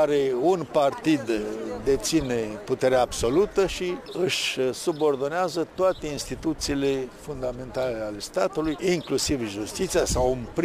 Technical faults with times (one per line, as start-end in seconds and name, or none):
0.00-10.64 crude rate conversion